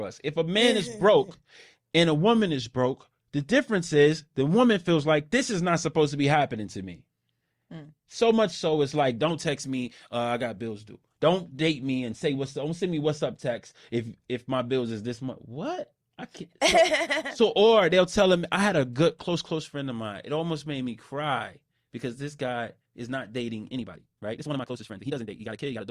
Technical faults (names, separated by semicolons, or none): time-stretched section